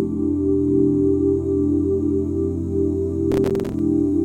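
Near the end of the clip, from 3.32 to 3.79 s, the processor falls behind and misses its deadline for filling small audio buffers, about twenty times in under half a second. The gaps are short, which fits buffers of around 5 ms. Each missed buffer drops out as a sliver of silence with abrupt edges, so the audio is chopped into a gritty burst of processor overload crackle. The crackle stops once the load eases at 3.79 s.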